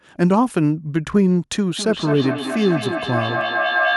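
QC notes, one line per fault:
1.77 s to the end, feedback howl: a second device in the room has closed a mic-to-speaker loop, and each pass comes back louder, narrowing to a tone around 1.5 kHz that pulses every fifth of a second or so and peaks about 2 dB under the speech.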